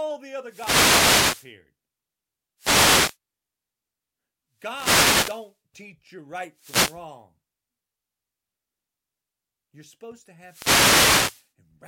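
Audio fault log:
0.43–1.54 s, 2.58–3.17 s, 4.56–5.56 s, 6.53–7.07 s, 10.41–11.50 s: wireless microphone noise hit. The FM radio link fades as reflections cancel, so receiver noise swells into swishes of static over the speech, the third just before "teach you", the fifth just after "supposed to".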